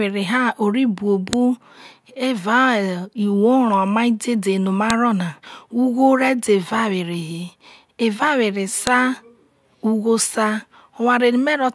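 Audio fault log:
1.33 s, 4.90 s and 8.87 s: file header played as audio. A sharp, loud click snaps out at each point, cutting across the speech regardless of what it is doing. Separate WAV pieces were joined with their headers left in. Those few dozen bytes play back as samples.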